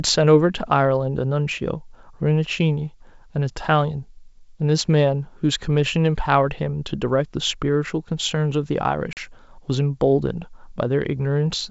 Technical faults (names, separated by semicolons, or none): packet loss on an ADPCM call